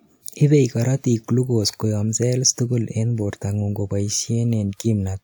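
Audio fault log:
No audible faults in the speech; nothing to log.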